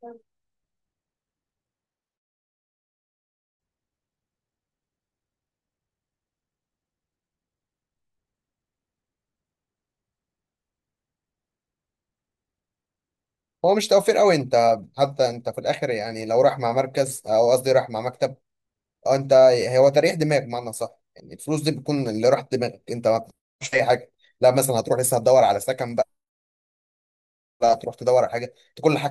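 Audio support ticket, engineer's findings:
Hiss/roughness 16.10–19.05 s, rising on loud, bright speech, absent in pauses. Converter sample clock jitter, around a microsecond; error scales with waveform slope, roughly 40 dB down.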